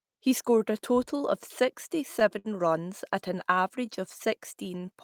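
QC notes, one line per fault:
Throughout: clock drift between sender and receiver. The sender's clock runs roughly 5% slow against the receiver's, so the jitter buffer keeps draining and the receiver must keep patching the gap. The speech never settles into a steady pace and carries recurring small timing hiccups.
0.06 to 4.93 s: repeated timing corrections. To stay in step with the slow sender, the receiver repeatedly stretches the stream by repeating short pieces, adding about 150 ms in total, which plays the speech at about 97% speed. This is heard as an unevenly dragging tempo with slight stutters.
2.39 to 2.48 s: short stall from a late packet. A packet arrived 61 ms late, the jitter buffer ran empty, and the receiver held the last sound for 61 ms until it came, then resumed where it left off. Nothing is lost, but one sound lingers too long with a faint buzz.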